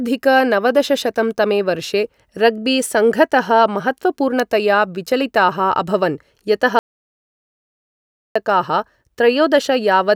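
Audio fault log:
6.79–8.36 s, audio dropout to silence: the speech stops abruptly in mid-flow and the signal falls to silence for about 1.56 s, with no room tone or noise floor underneath, then resumes just as suddenly. That silence points to the input being lost while recording carried on writing silence, likely a momentary disconnect, link failure or accidental mute. Whatever was spoken during the gap is not recoverable.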